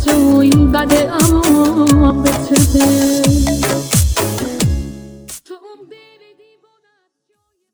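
No technical faults can be heard in the signal, and the smooth fade-out that begins at around four and a half seconds and runs to the end tapers the level gradually without any click or hard edge.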